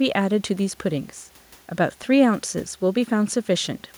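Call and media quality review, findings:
Nothing to flag on this one: the speech comes through with no audible glitches, dropouts or distortion anywhere in the clip.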